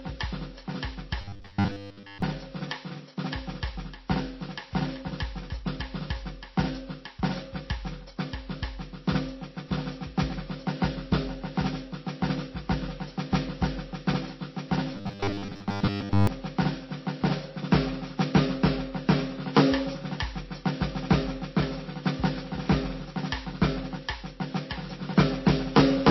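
Throughout the music, the artefacts of one codec are heard together with different ones from another. That points to transcoding between lossy codecs, likely a low-rate MP3 re-encoded to WMA, rather than a single encode, whose artefacts would share one character.

From 1.21 to 2.22 s and again from 14.96 to 16.27 s, the music turns into a rigid metallic buzz at 100 Hz that only loosely tracks the sound. This is robotic sound from repeated short buffers. The likely cause is audio arriving too slowly, so the player loops roughly 10 ms slices, which fits a 10 ms buffer, covering most of the span. Unlike a dropout, the gaps are filled with buzz, not silence.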